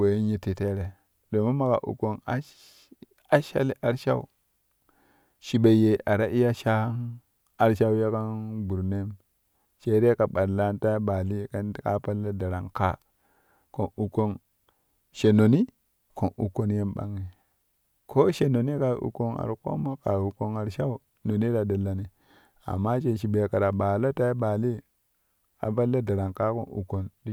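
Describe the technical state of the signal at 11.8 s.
At 11.8 s the speech signal is intact, with no technical fault at that moment.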